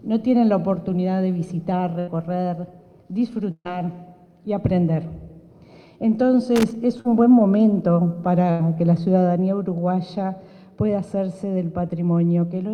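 Three bursts of packet loss break up the audio, at 1.99 to 2.09 s, 3.51 to 3.67 s and 8.51 to 8.61 s. Each time the receiver stretched the last sound over the hole and let it fade. About 80 ms, 140 ms and 80 ms of real material are gone, and the middle gap drops to silence for its final 50 ms. From 6.56 to 6.75 s there is loose connector crackle: an irregular scratchy burst as a worn or dirty contact made and broke the signal path. A short concealed packet loss follows at 7.01 to 7.07 s. About 40 ms went missing and was patched by extending the preceding sound and blending back. The result is a brief smear that runs a few milliseconds long.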